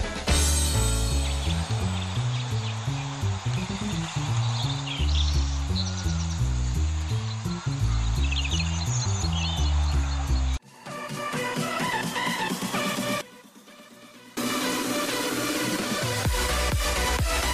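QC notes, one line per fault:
13.21–14.37 s, one channel inverted: one stereo channel has likely flipped polarity, so everything common to both sides cancels when summed, dropping the level by about 21 dB. The centred content nearly vanishes for just over a second, leaving a faint residue.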